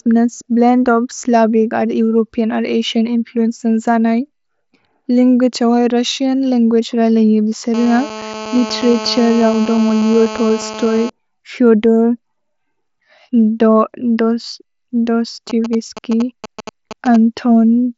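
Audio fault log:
7.74–11.10 s, GSM phone buzz: a 2G phone on a call close by keeps transmitting radio bursts about 217 times a second, and the audio circuit rectifies them into a steady, raspy 217 Hz buzz rich in harmonics, sitting about 12 dB below the speech and unrelated to it.
15.50–17.16 s, GSM signalling bursts: a nearby 2G phone sends only brief groups of radio bursts while signalling, which the circuit again rectifies, giving a galloping dit-dit-dit of short 217 Hz buzzes, roughly 10 dB below the speech.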